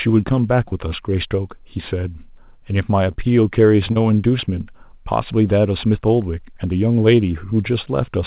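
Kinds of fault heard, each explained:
Short concealed packet loss, at 0.68, 3.12 and 3.92 s: each time about 40 ms of audio reached the decoder too late, so the receiver extended the preceding sound across the gap and blended back, leaving a brief smear in the 4 kHz-limited call audio.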